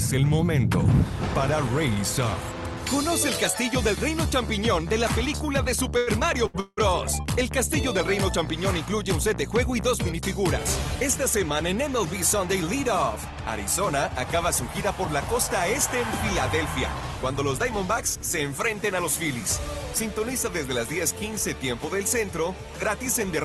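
At 5.97 s the sound hangs on for about 95 ms before moving on, a short stall from a late packet. The jitter buffer ran dry while a packet was overdue, so the receiver stretched the last stretch of audio until it arrived and then resumed at the same point. Nothing is lost, but the held sound has a faint buzzy quality, and everything after it lands about 95 ms later. A second, similar stall follows at 6.47 s, holding for about 70 ms with the same slight smearing.

Right after, at 6.60 s, the audio freezes for about 194 ms: the last sound continues as a decaying buzz, then drops into roughly 50 ms of silence before picking up again at 6.79 s. This call audio freeze is likely the result of packets held up in transit long enough to empty the jitter buffer, with 174 ms of concealment inserted. Again nothing is skipped; a gap is pushed into the timeline.

From 13.16 s to 13.43 s the jitter buffer speeds up to cut the extra delay it is holding. 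It trims short pitch-period slices, around 50 ms in total, so the passage runs about 13% fast at unchanged pitch and sounds briefly hurried. Throughout, the band tops out near 12 kHz, consistent with a super-wideband Opus call path at moderate bitrate.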